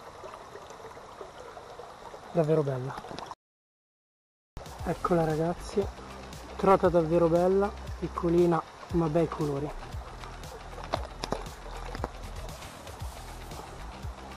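At 3.34 s the input feeding the recorder most likely dropped away, perhaps through a lost connection or an accidental mute, while writing carried on with nothing but silence. The result is an audio dropout to silence lasting about 1.23 s, until 4.57 s. The sound stops abruptly mid-flow and resumes just as abruptly, and the gap between is dead silence with no room tone at all. Whatever played during that stretch is simply missing.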